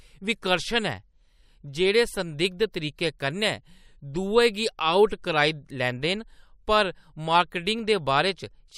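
No technical faults can be heard anywhere in the recording. At no point does anything in the speech signal stand out as a defect.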